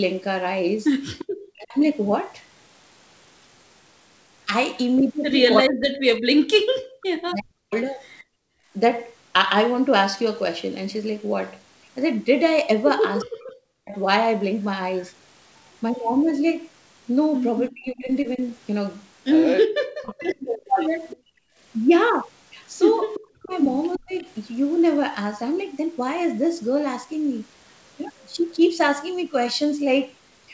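From 1.18 to 1.25 s an echo leak is heard: a faint copy of the speech returns 350 ms late, about 15 dB below it, likely from a loudspeaker echo the far end failed to cancel. From 1.53 to 1.8 s the speech dips by roughly 25 dB, likely speech suppressed in double talk, as the canceller ducks the talker along with the loudspeaker echo. From 5.62 to 7.74 s this likely suppression returns harder, dipping the speech by up to roughly 40 dB. From 6.64 to 8.72 s the background is gated by the echo canceller, with room sound dropping by about 36 dB before recovering. At 7.01 to 7.06 s a much fainter echo scrap slips through, about 30 dB down. From 13.2 to 16.04 s the 350 ms echo returns for a longer stretch, about 15 dB down, while from 13.24 to 13.95 s the speech is choked again. From 17.69 to 24.25 s the longest likely suppression dips the speech, roughly 40 dB deep. From 21.1 to 24.23 s echo leaks through again. 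Within that, from 21.17 to 21.58 s, the room sound is gated once more, by about 32 dB. Throughout, the G.722 call path limits the audio to 8 kHz.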